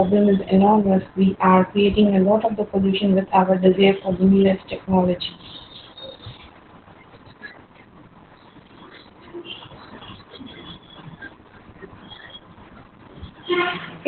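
Opus voice compression runs through the whole clip. The linear-prediction voice coder has cut the band to narrowband, leaving nothing above 4.3 kHz, and codes the excitation coarsely, which fits a bitrate near 8 kbps. The speech sounds muffled, hoarse and slightly robotic.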